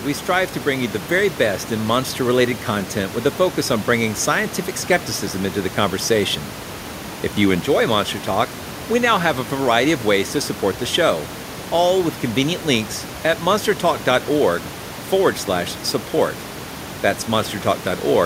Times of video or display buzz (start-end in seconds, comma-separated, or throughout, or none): none